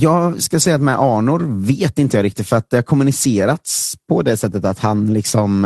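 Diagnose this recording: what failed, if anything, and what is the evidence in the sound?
Network stage: a lost packet rebuilt from error correction at 0.61 s. One 20 ms frame of speech turns briefly rougher and noisier, with no gap. The packet was lost, and the decoder played the low-bitrate Opus copy carried in the following packet, so the audio stays continuous at reduced quality.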